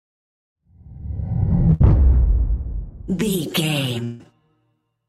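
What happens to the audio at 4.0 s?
From 4.04 to 4.21 s a fading buzzy continuation of the preceding sound fills the gap, then audio resumes with that stretch missing, likely a long network dropout.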